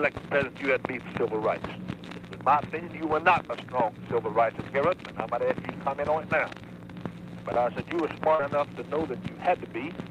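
At 8.35 to 8.41 s, about 40 ms of audio failed to reach the decoder in time, a short concealed packet loss. The receiver covered the gap by extending the preceding sound for 34 ms and blending back, leaving a brief smear or wobble.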